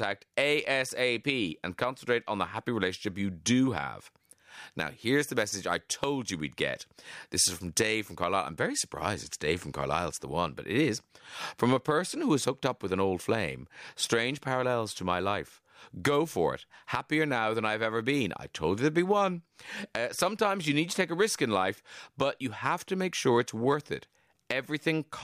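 No technical faults can be heard anywhere in this speech recording, so there is nothing to describe in time order.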